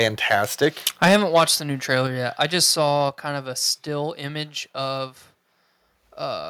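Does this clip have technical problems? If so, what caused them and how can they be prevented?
Yes. From the start to 0.35 s, and again from 0.62 to 1.44 s just before "the new", the loudest peaks get a harsh, crackly edge. That's microphone overload, likely from input gain set so high that peaks ran about 5 dB and then about 8 dB past the converter's ceiling and got flattened. Lower the mic's input level before the call so peaks stay below full scale.

There are also sudden level drops at 1.08 s (about 3 dB), at 2.07 s right after "the new" (about 4 dB), and at 3.09 s after "yet I just saw" (about 4 dB). Voice and background fall together each time. That pattern looks like microphone volume stepped down, likely the call software reacting to the clipping by lowering the device input in steps. Setting a sensible level up front, or turning off automatic mic adjustment, prevents it.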